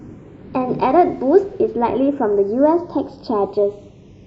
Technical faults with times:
0.00-4.26 channels drifting apart

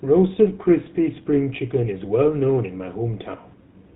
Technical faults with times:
0.00-3.95 GSM full-rate codec

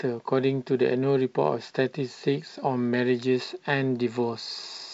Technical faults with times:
none

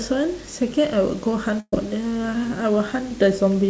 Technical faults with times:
1.60-1.73 burst of packet loss

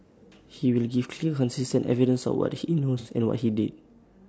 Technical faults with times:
0.00-4.29 low-delay AAC compression
2.99-3.08 AAC frame loss with concealment

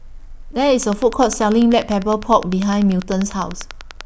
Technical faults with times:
0.83-4.02 train of clicks

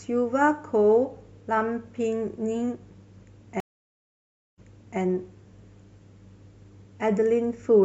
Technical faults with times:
3.60-4.99 stream reconnect

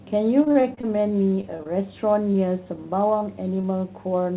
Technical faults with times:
0.44-0.96 repeated packet loss (robotic sound)
1.30-1.73 repeated packet loss (robotic sound)
2.32-2.36 short concealed packet loss
2.64-2.68 short concealed packet loss
3.19-3.23 short concealed packet loss
3.61-3.65 short concealed packet loss

